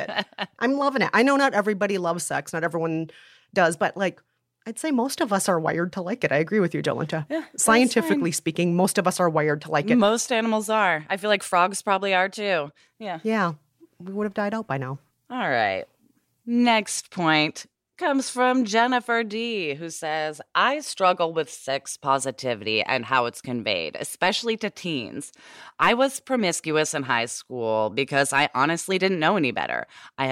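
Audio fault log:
No faults are logged for this speech clip.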